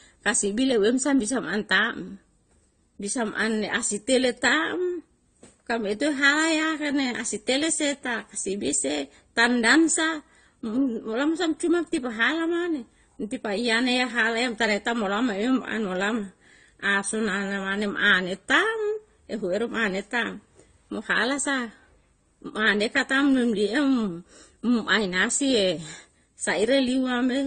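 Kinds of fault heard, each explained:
Transcoding between lossy codecs: The speech has nothing above 9 kHz throughout. Two different sets of coding artefacts are heard together. This likely comes from a low-rate Opus encode later re-encoded as AAC-LC, which spends its bits on the earlier damage.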